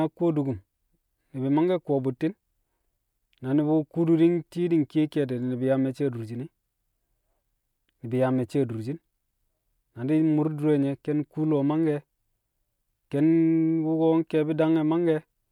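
Nothing stood out as technically wrong on listening to this speech recording.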